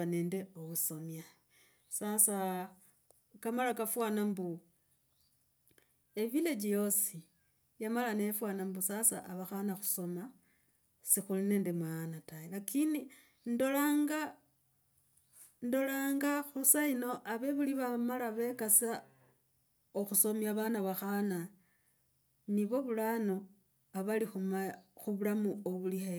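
Nothing stood out as a technical fault on listening to this speech recording.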